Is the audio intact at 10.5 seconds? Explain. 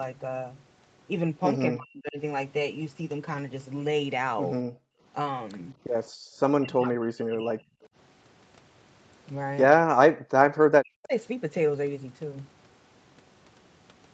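No. From 10.52 to 10.57 s the speech briefly ducks by around 40 dB for about 50 ms and then recovers. This is speech suppressed in double talk, likely caused by the echo canceller mistaking the near talker for loudspeaker echo while both sides spoke and turning the signal down.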